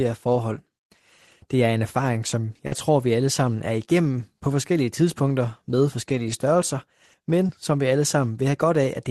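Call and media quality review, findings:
Short concealed packet loss, 2.67–2.74 s, between "er en erfaring som" and "tror vi alle sammen", and 7.48–7.51 s, just before "som vi alle". Jitter buffer/decoder concealment extended the last sound over roughly 40 ms and 20 ms gaps. Brief smear.

Lost packet rebuilt from error correction, at 2.72–2.74 s, spread through 6.08–6.34 s (about 140 ms rebuilt), and at 7.49–7.51 s. Opus in-band FEC copies played in place of the lost packets, so there are no gaps, but those frames are rougher and noisier.

Call path coding noise and a top end stopping around 12 kHz fit Opus at roughly 24 kbps.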